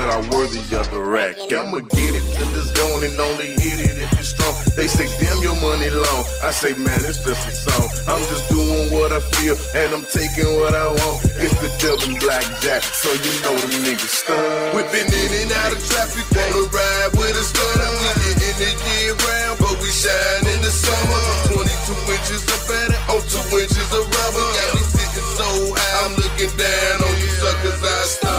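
No technical faults can be heard anywhere in the clip.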